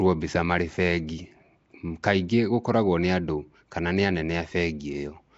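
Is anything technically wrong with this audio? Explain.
Yes. Throughout the speech there is a rough, hissy halo around every syllable and a smeared, underwater quality, with nothing above 7.7 kHz. This is likely Nellymoser compression, the old Flash microphone codec, at a rate that fits a 32 kbps stream. It spends only about two bits per sample on each short block, so weak bands get no real coding and are filled with noise. On a spectrogram the energy stops flat at 7.7 kHz, and harmonics dissolve into speckled, blocky noise patches.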